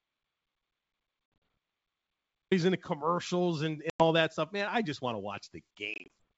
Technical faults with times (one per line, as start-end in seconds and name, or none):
0.00-2.51 audio dropout to silence
1.26-1.42 packet loss on an ADPCM call
3.90-4.07 packet loss on an ADPCM call
5.94-6.32 packet loss on an ADPCM call